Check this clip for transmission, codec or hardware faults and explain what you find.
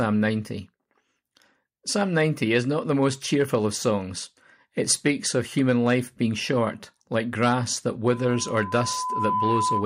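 One fault: loudspeaker feedback squeal, from 8.07 s to the end at 9.86 s, starting right after "short like grass that". A microphone is picking up its own loudspeaker, and at 1 kHz the loop gain exceeds one, so that tone grows over about a second and a half until it is roughly as loud as the speech. Unlike a steady interference tone, it swells gradually rather than appearing at full level.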